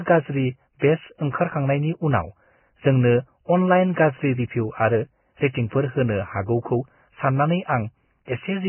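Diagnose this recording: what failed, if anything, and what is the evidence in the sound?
The codec stage is the likely culprit: the speech carries heavy Vorbis compression damage from start to finish. Nothing survives above 3 kHz, so the top end is simply gone, and what remains in the upper band sounds hissy and grainy, with rough tones and smeared consonant onsets. At this setting the encoder pulls its cut-off down and quantises the remaining treble so coarsely that detail turns into noise, which points to a bitrate somewhere around 10 kbps.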